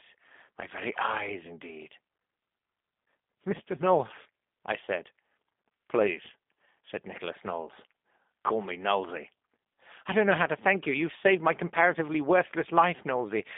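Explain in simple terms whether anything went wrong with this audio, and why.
G.729 codec damage runs through the whole clip. This phone-call codec doesn't send the real waveform; it rebuilds speech from a model of the vocal tract and pitch. That leaves a plainly audible rough, synthetic quality, and nothing above 3.7 kHz survives.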